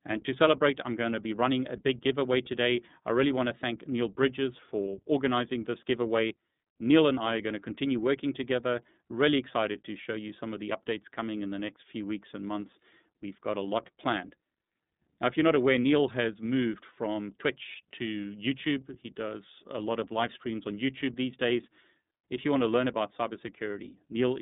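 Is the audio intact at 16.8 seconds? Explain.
No. At 16.8 s, as throughout, the speech carries iLBC codec damage: each 30 ms frame is coded on its own, giving a plainly rough, synthetic texture. A spectrogram shows a hard ceiling near 3.8 kHz and little energy below 150 Hz.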